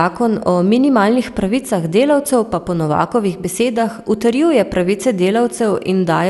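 Throughout, the speech was likely re-encoded about three times with MP2 at what fits 96 kbit/s. This generation loss sounds swirly, hollow and smeared, with nothing above 11.9 kHz.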